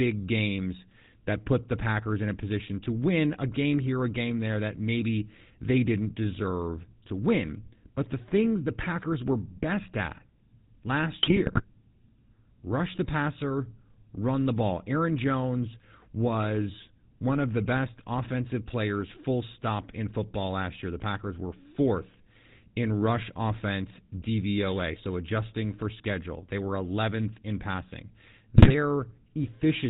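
GSM full-rate codec damage runs through the whole recording. The speech passes through a vocal-tract model driven by a sparse pulse train, and everything above 4 kHz is gone. The result is a plainly audible buzzy, gravelly roughness that fits the 13 kbps full-rate scheme.

GSM bit errors strike from 11.22 to 11.62 s and again from 28.56 to 28.71 s. Corrupted filter, pitch and gain parameters reach the decoder, so individual frames get a warped spectrum or a sudden level jump. The speech breaks into squawks, pops and gargling, and the second burst is denser.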